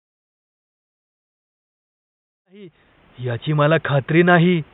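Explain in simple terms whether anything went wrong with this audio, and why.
Nothing went wrong here: the faint background noise under the speech belongs to the room the microphone was in, and the gradual rise in level from roughly 2.5 s to 3.44 s is a smooth fade-in of the kind an editor applies, with no click or hard edge.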